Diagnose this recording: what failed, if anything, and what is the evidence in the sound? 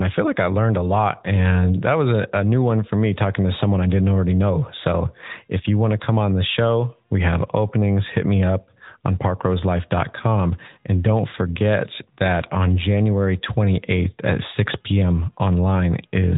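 It's the codec stage: the whole speech clip has gone through the AMR narrowband mobile codec. Everything above 3.8 kHz is gone, and the clearly buzzy, synthetic edge fits a mode near 10.2 kbps, where sparse pulses driving a vocal-tract model stand in for the real waveform.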